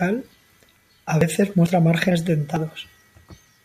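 Audio missing between chunks at 1.21, 1.66, 2.11 and 2.56 s breaks up this speech clip with four abrupt skips, each cutting out roughly 50 ms with the surrounding sound butted straight together and no gap of silence. The skips arrive every 0.45 s, which fits a likely cause of a recorder or processor handling the audio in 0.5 s chunks and dropping a short slice each time it hands over from one chunk to the next.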